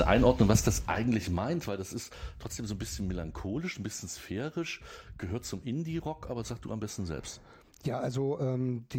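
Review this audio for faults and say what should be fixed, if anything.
Zipper noise, 0.45 to 1.74 s: the level falls about 10 dB in 1 dB steps, around ten a second, each ticking. Ramp the gain per sample instead of stepping it per block.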